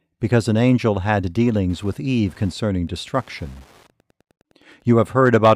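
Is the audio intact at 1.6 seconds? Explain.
No. At 1.6 seconds the clip is already affected by Wi-Fi interference, which runs from 1.56 s to 5.05 s, starting just after "because an angel had". A nearby Wi-Fi radio's beacon, repeating every 102.4 ms, is picked up and rectified by the audio circuit, producing a steady ticking at close to ten clicks per second. It sits well beneath the speech, roughly 35 dB down.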